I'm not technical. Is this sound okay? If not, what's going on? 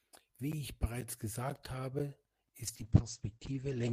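No. From about 2.65 seconds to the end, there's a call bitrate drop: the call suddenly had less room to send audio, so the sound gets squeezed harder. It turns rougher and more muffled, losing its crisp top end, and never recovers before the clip ends.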